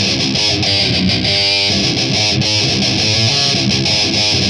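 A drift correction step runs from 0.67 to 1.70 s. The sound slows by about 6.2 percent and drops roughly 111 cents, just over a semitone, then snaps back to normal. The likely cause is clock-matching software stepping its playback rate to rebalance a buffer.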